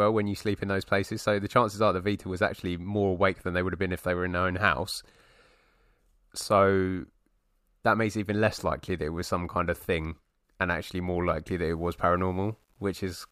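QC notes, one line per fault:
11.57–13.31 s, low bit depth without dither: the speech turns grainy for its final stretch, a rough distortion that rises and falls with the voice and is heaviest on quieter syllables and decays. This is likely from rounding to about 10 bits with no dither, so the error tracks the signal instead of forming steady hiss, sitting roughly 45 dB below it. On a spectrogram, broadband grit appears only where sound is present. In the waveform, low-level passages show visible stair-steps.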